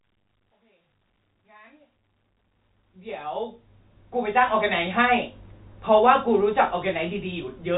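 This speech clip has nothing technically wrong with it; the gentle fade-in over roughly the first 4.7 seconds and the narrow telephone-band sound are just how it was meant to be.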